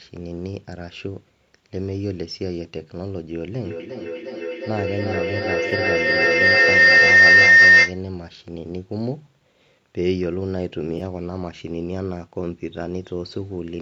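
At 3.6 s a feedback howl starts and runs to 8.04 s. Sound from a loudspeaker is picked up again by a nearby microphone, louder on each trip. A tone near 2 kHz builds, pulsing roughly every 0.4 s, peaking about 15 dB above the speech.

At 5.70 to 5.73 s, inside the howl, there is AAC frame loss with concealment. About 20 ms of audio went missing, which fits two lost frames. The decoder patched the gap from the last good spectrum. It sounds like a brief smeared, noisy blip. The same fault recurs at 10.98 to 11.01 s, with the same short, phasey smear.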